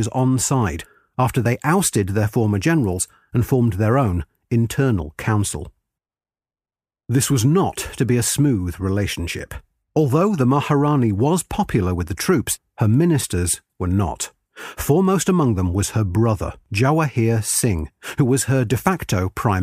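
No technical faults are audible.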